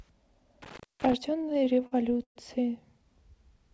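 Between 0.62 and 1.13 s the speech drops out with a crackle at each edge, and for about 265 ms of that stretch only faint hiss remains. This is an intermittent contact: a loose cable or plug briefly lost its connection, so the signal path opened and closed. The scratchy make-and-break sounds at the boundaries come from the contact bouncing as it separated and reconnected.

From 1.38 to 2.37 s the speech catches and drags in a run of small hesitations. This is repeated stalls (stutter): packets came in late or too slowly, and the jitter buffer ran dry 13 times. Each time, the receiver stretched the last sound to cover the gap. The fill adds up to 275 ms, about 28% of that span, and the longest single wait is 120 ms. Nothing is lost, but the timing limps. Throughout, nothing reaches above 8 kHz, which fits a G.722 call path.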